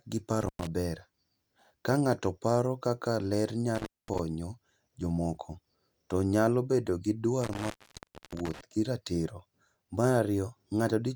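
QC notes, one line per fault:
0.41–0.67 s: intermittent contact. The speech drops out for about 0.10 s with crackle at both edges and faint hiss in the gap, as a loose plug or cable momentarily breaks the signal path.
3.75–4.19 s: intermittent contact. The same fault with a longer open, about 0.22 s, framed by scratchy bursts as the contact makes and breaks.
7.42–8.61 s: intermittent contact. The longest break, about 0.63 s of hiss-filled silence, with crackle around it as the connection chatters before and after the open.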